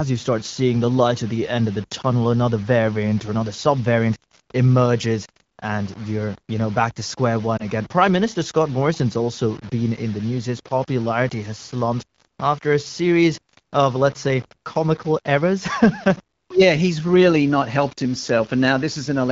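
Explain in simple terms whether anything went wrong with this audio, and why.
Two things went wrong. Throughout the clip, the speech has a grainy, gritty edge that follows the voice, roughest on quiet sounds. The likely cause is low bit depth without dither: the sound was rounded to only a few levels, consistent with about 6 bits. Steady hiss would stay the same regardless of the voice, but this grit rises and falls with it.

There are also two lost AMR speech frames. The first comes just after "know back to square", around 7.57 to 7.64 s. The second ends just before "in the news", around 9.59 to 9.64 s. Each is a brief dip or warble in the voice, where the phone decoder patched over a missing scrap of speech. These are short blips at two moments, not constant roughness, and the voice doesn't fade out.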